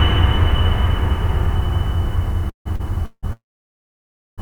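Call audio freezes hit the music at 2.49 to 2.67 s, 3.05 to 3.25 s and 3.33 to 4.40 s. Packets were most likely delayed in transit, emptying the jitter buffer. The last sound is extended as a buzz that fades into silence: about 120 ms, 40 ms and 970 ms of silence respectively. The music then resumes where it stopped. The fade to silence is what sets these apart from a stall.

A short stall from a late packet at 2.75 to 2.81 s holds the last sound for only 40 ms, with a slight buzz or dip and no silence, before continuing from the same point.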